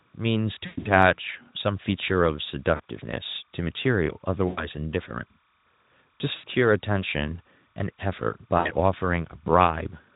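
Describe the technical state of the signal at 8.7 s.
At 8.7 s the signal is at the tail of VoIP packet loss concealed by the speech codec, spanning 8.57 to 8.71 s. The decoder extrapolates roughly 80 ms, about four frames, into a fading, stretched sound. Timecode bleed also runs underneath, a faint chirping warble switching near 1 and 2 kHz, about 40 dB below the speech.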